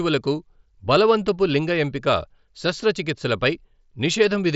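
No technical faults can be heard in this speech recording. It has the sound of a Bluetooth headset's mSBC wideband link, with nothing above about 7.7 kHz and a light graininess from the codec on the louder passages.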